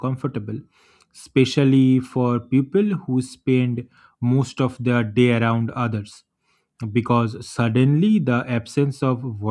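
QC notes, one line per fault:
No technical faults are audible in the signal; the level, continuity and timing of the recording hold steady across the whole clip.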